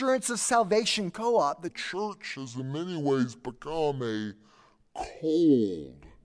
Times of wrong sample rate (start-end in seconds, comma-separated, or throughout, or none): 1.68-6.24